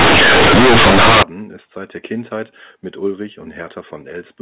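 Until 1.23 s, before "ist seit der", companded audio read as linear turns A-law bytes into loud buzzing distortion: large, bent-out-of-shape waveform, broadband spectrogram smear.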